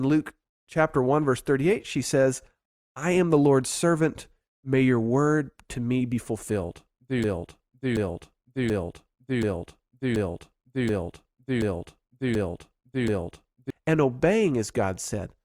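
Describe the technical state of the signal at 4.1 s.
At 4.1 s the speech signal is intact, with no dropout, clipping, distortion or other technical fault.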